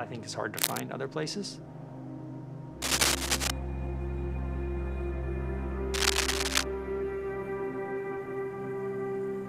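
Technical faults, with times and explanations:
0.56–0.80 s, 2.82–3.50 s and 5.94–6.64 s, cable scratch noise: three short bursts of harsh, crackling rustle sit over the sound, each lasting between about a quarter and seven tenths of a second and standing somewhat above the program material. The dense, irregular texture most likely comes from a worn cable, connector or control being disturbed, so its contact resistance jumps about rapidly and injects ragged noise into the signal path.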